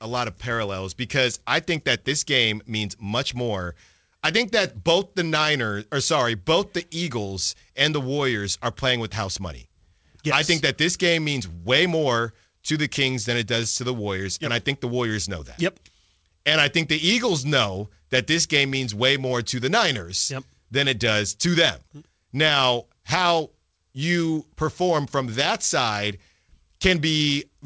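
Clock drift between sender and receiver runs through the whole recording. The sending end's clock runs around five percent fast relative to the receiver, so audio arrives faster than it is played out and the jitter buffer keeps filling. The receiver cannot simply let the backlog grow, so it has to keep discarding material to stay in step. The result is a persistent, low-level instability in timing across all of the speech rather than a single audible event.

Repeated timing corrections begin at 0.21 s and continue to the end. To absorb the surplus from the fast sender, the receiver repeatedly trims short pieces of audio, all in the same direction, which brings the effective playback speed to 104 percent. The edits are small and unevenly spaced. If they are heard at all, they come through as faint hiccups and a slightly hurried, uneven pace in the speech. The call codec path, whose sound fits G.722 at 64 kbps, carries nothing above 8 kHz.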